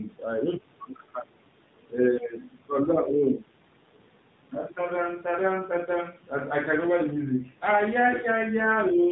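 Speech runs through the whole clip with the buzzy, synthetic edge of the AMR narrowband mobile codec, and the damage is plainly audible. The harshness points to one of its lower modes, around 7.4 kbps, where only a few pulses drive the vocal-tract model in each 5 ms. On a spectrogram, energy stops dead at 4 kHz, consistent with 8 kHz sampling, and harmonics look smeared and blocky rather than smooth.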